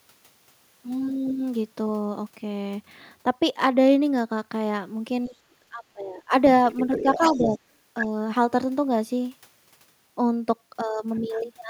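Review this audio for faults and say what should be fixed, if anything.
The speech gets ducked in three spots: a hard dip of around 30 dB from 5.28 to 5.54 s, a softer one of about 15 dB from 5.7 to 6.32 s, and a slight sag of roughly 5 dB from 6.87 to 7.57 s. That's likely speech suppressed in double talk. Both ends were talking at once, and the echo canceller couldn't tell the local talker from the loudspeaker echo, so it pulled everything down. To prevent it, use an echo canceller with better double-talk detection, or a headset, so it isn't guessing.

There's also the other side's voice leaking through. It runs from 6.65 to 7.58 s at about 10 dB under the main talker, right where that last dip sits. A quick scrap at 8.0 s comes in only about 5 dB down, and a faint trace sits around 25 dB down from 11.15 to 11.4 s. The likely cause is the far-end audio playing out of the device's speaker and reaching the mic, with the canceller not scrubbing all of it. 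Fixing it comes down to headphones, or lower speaker volume and a better-converged echo canceller.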